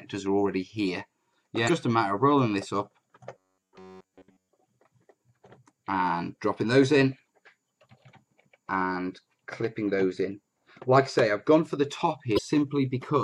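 Two kinds of technical fault occur in this audio. Damaged data in a compressed stream causes short blips at 1.66 to 1.70 s and 12.35 to 12.39 s. There the decoder misreads corrupted frames and resyncs on the next header. On a spectrogram each blip is a brief broadband vertical smear with an abrupt waveform discontinuity. From 3.36 to 4.51 s the sound turns into a rigid metallic buzz at about 94 Hz. The likely cause is robotic sound from repeated short buffers: a chunk of roughly 10.7 ms is looped while most of the real audio in that stretch is skipped. The waveform shows near-identical repeating cycles, and the spectrogram shows evenly spaced horizontal harmonic lines every 94 Hz.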